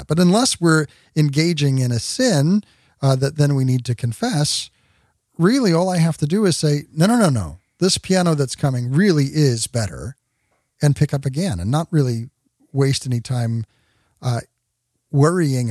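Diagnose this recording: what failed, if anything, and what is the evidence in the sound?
A single sharp click sits at 7.00 s, between "to do is say" and "no no no". It is dropped samples: only a handful go missing, well under a millisecond, so the waveform jumps to a later value. A driver or buffer glitch is the likely cause.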